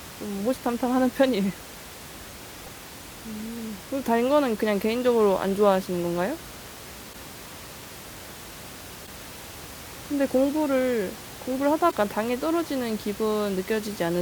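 Damaged data in a compressed stream strikes the speech four times, each lasting about 56 ms: 2.63 to 2.68 s, 7.09 to 7.15 s, 9.03 to 9.08 s and 11.87 to 11.93 s. Corrupt bytes make the decoder misread frames and hunt for the next valid header, producing a chirp, squawk, click or short hole. Room noise sits about 17 dB below the speech.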